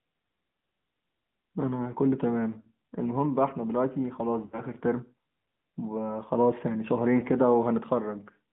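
The whole speech clip has passed through the AMR narrowband mobile codec. Its band runs from about 150 Hz to 3.4 kHz, so it sounds thin and boxy. The codec rebuilds the voice from a vocal tract model and a few pulses. Here that gives a plainly audible buzzy, synthetic edge. The degree of damage fits a mid-rate mode near 10 kbps.

Lost AMR speech frames cause three brief faults. The first runs from 2.60 to 2.67 s, about 40 ms long. The second runs from 4.46 to 4.62 s, about 60 ms. The third runs from 7.20 to 7.24 s, about 20 ms. Radio errors broke those frames. The decoder then repeated its last good settings at falling gain. Each gap sounds like a short smeared dip or warble. The longest one stretches and fades before the voice returns.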